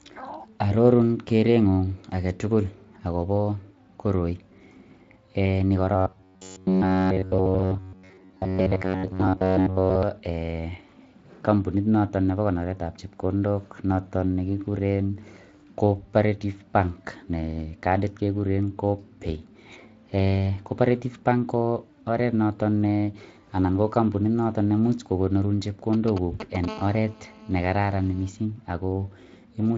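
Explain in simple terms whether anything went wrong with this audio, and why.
A few things went wrong. From 5.96 to 10.03 s the speech turns into a stiff, metallic buzz at about 94 Hz: robotic sound from repeated short buffers. The likely cause is audio arriving too slowly, so tiny chunks of roughly 11 ms get replayed while most of the real sound is skipped.

At 25.93 s a nearby 2G phone starts talking to its network. Until 26.66 s you hear GSM signalling bursts, a fairly loud, galloping ticking pattern. The audio circuit is picking up the phone's radio pulses as sound.

Straight after, from 26.68 to 28.29 s, that phone settles into a call and you get GSM phone buzz, a steady, raspy drone at 217 Hz sitting under the speech. It's quieter than the bursts, but it has nothing to do with the speech itself.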